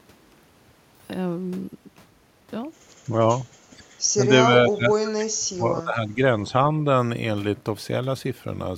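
Speech suppressed in double talk at 3.06–3.17, 3.71–3.90, 4.16–6.25 and 6.43–6.55 s: the speech sinks in level, mildly at first, then by about 30 dB across the two-second stretch. This is likely an echo canceller ducking the talker while the far side also spoke.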